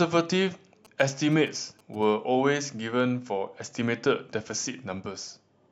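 Speech carries GSM signalling bursts from 0.85 to 2.04 s. A galloping dit-dit-dit of short 217 Hz buzzes sits well beneath the voice. It points to a nearby 2G phone signalling, its radio bursts rectified by the audio circuitry.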